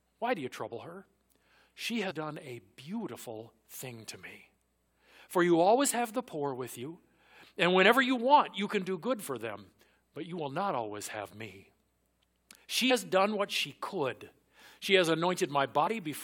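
Compressed frames are skipped at 2.1, 6.81 (after "have the poor with"), 12.9 (before "done what she could") and 15.86 s. The speech jumps ahead roughly 100, 40, 100 and 70 ms.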